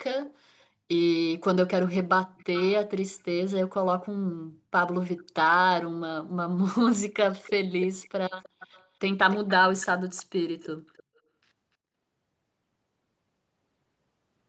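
Speech, with echo leak in six places: 2.37 to 2.71 s, 5.18 to 5.23 s, 7.43 to 8.09 s, 8.41 to 8.87 s, 9.31 to 10.23 s and 10.6 to 11.03 s. A faint delayed copy of the speech trails it by about 0.33 s in the first two and about 0.29 s later, likely from a loudspeaker echo canceller letting residue through. On a spectrogram, which shows nothing above 8 kHz, the copy appears as weaker, shifted repeats of the speech harmonics.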